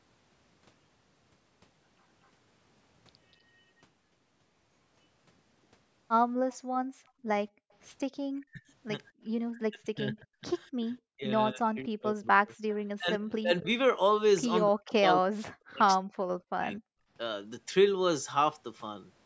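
A faint, delayed copy of the talker's own speech comes back from 6.50 to 7.11 s, trailing by about 250 ms at roughly 30 dB below the voice, and again briefly from 12.69 to 12.75 s, at a 262 ms lag and roughly 25 dB down. This is an echo leak: the far end was most likely on a loudspeaker, and its echo canceller let part of what its microphone picked up return down the line. Over almost the same stretch, 6.58 to 7.71 s, the room sound behind the speech sinks by about 32 dB for around 0.7 s in total before recovering, with a shorter dip from 9.12 to 9.24 s. This is background gated by the echo canceller, which turned the microphone down hard while its loudspeaker was playing and released it afterwards. The talker's voice itself dips sharply, by around 40 dB at its deepest, at 8.44 to 8.63 s, 9.54 to 10.37 s, 11.08 to 13.68 s and 14.66 to 16.83 s, with the longer spans losing roughly 1.5 s of speech each. 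This is speech suppressed in double talk: both sides were talking at once, and the canceller, likely unable to separate the near talker from the loudspeaker echo, turned everything down. The call's microphone processing leaves nothing above 8 kHz in the speech.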